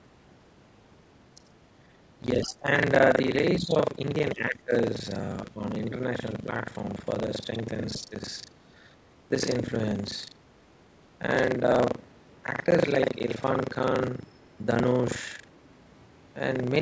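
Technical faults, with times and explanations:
Throughout, buffer tearing: the program filling the playback ring buffer and the hardware reading it have drifted out of step, so their positions cross inside every period. About a third of each buffer carries audio left over from one lap earlier, roughly 70 ms old, spliced in with hard edges on both sides. Those joins repeat at 25 Hz and produce a steady robotic buzz that rides on the sound and disappears in silence.
2.36 to 2.67 s, 3.58 to 3.74 s, 4.34 to 4.72 s, 5.54 to 5.60 s and 8.01 to 8.12 s, speech suppressed in double talk: the talker's level drops in short bites. The deepest dips, around 20 dB, come in the first and third spans. The second and fifth fall by about 10 dB, and the brief fourth is barely 5 dB. The likely cause is an echo canceller that could not separate the talker from loudspeaker echo while both sides spoke, and so turned everything down.
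14.27 to 14.58 s, other side's voice leaking through: a faint second voice, about 35 dB below the talker, is left in the microphone signal for roughly a third of a second. This is likely loudspeaker playback of the far end that the echo canceller failed to remove completely.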